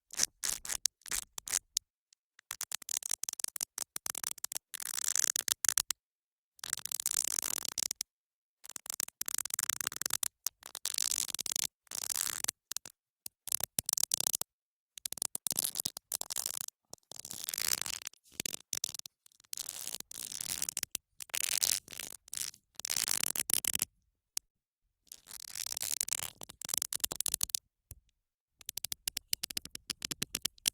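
At 15.67 s and again at 15.81 s the everyday sound briefly hangs, each time holding the last fragment for about 20 ms with a faint buzzy smear before carrying on from exactly where it left off. These are short stalls from a late packet. A packet missed its playout slot, the jitter buffer ran dry, and the receiver stretched the preceding audio until the packet turned up. Nothing is lost, but each stall pushes playback about 20 ms later. A third, longer stall at 24.29 s holds for about 40 ms in the same way.

From 24.45 s to 24.85 s the sound drops to silence for roughly 370 ms, then resumes seamlessly from the point where it stopped, with nothing skipped. This is a call audio freeze, likely caused by packets being held up in transit so that the jitter buffer emptied and the receiver, having nothing to play, inserted silence until the delayed packets arrived. The gap adds about 370 ms of delay.

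Between 26.55 s and 30.65 s the audio runs slightly fast, at about 103% speed, with no change in pitch. This is a jitter buffer speed-up. After the freeze, the buffer held more audio than its target. To work the latency back down, the receiver trimmed many tiny pitch-period-sized slices, around 150 ms in total over those four seconds.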